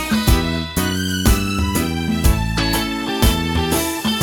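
No technical fault can be heard anywhere in the audio: the level holds steady, the signal stays continuous without gaps or interruptions, and nothing in the sound points to a problem in recording or playback.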